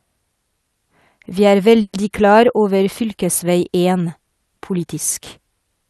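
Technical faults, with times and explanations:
1.81–1.95 s, call audio freeze: the sound stalls for about 120 ms, the last moment stretched into a short fading buzz or hiss rather than true silence, then resumes exactly where it left off, so nothing is missing and everything after simply arrives about 120 ms later. That separates it from a packet-loss dropout, which removes audio. The likely cause is packets held up in transit until the jitter buffer ran empty, on a call path whose Opus coding caps the top end near 12 kHz.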